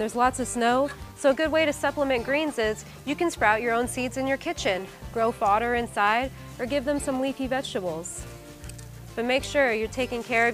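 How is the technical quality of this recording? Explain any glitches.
No glitches can be heard anywhere in the recording. Its technical quality holds steady throughout, with nothing breaking into the sound at any point.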